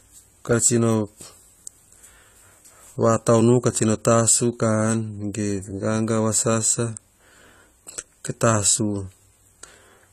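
From the first moment the speech carries the dull, smeared texture of AAC compression, likely at a low bitrate around 32 kbps. The treble is cut off, and quantisation smearing is plainly audible. Unlike a simple low-pass filter, the damage shows as coarse texture within the remaining band, not just missing treble.

At 0.61 s a single sharp click marks dropped samples, likely just one sample or so removed, so the waveform jumps straight to a later value. No audible sound is lost, which separates it from a dropout. It is a lone tick, not a gap or a repeating pattern.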